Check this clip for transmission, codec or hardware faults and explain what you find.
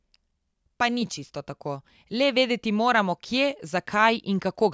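Listening through the speech, I hear nothing that points to a transmission, codec or hardware problem.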